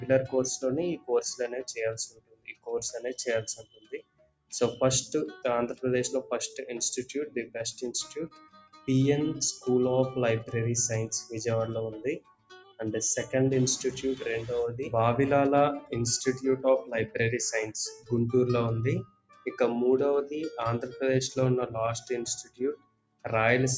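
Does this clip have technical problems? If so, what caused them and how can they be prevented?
Yes. Throughout, the level pumps and flutters by around 10 dB as held tones and decaying tails sink while sharper onsets come through. This is a noise suppressor applied to music or sounds: a speech-tuned suppressor mistakes steady, non-speech sound for noise and keeps pulling it down. To prevent it, turn off noise suppression, or use a music mode, whenever the source isn't speech.

In eight places the sound is cut by the noise suppressor, dropping or ending early: 2.09–2.67 s, 3.57–4.52 s, 8.3–8.88 s, 12.2–12.79 s, 17.96–18.11 s, 19.04–19.46 s, 22.43–22.6 s and 22.76–23.25 s. The deepest drops reach about 21 dB, and the shortest, at 17.96 s, about 13 dB. Here the suppressor judged sustained passages to be noise and attenuated them harder. To prevent these cuts, disable the suppressor or raise its threshold for sustained material. 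The call's microphone processing, which leaves nothing above 8 kHz, is working as intended.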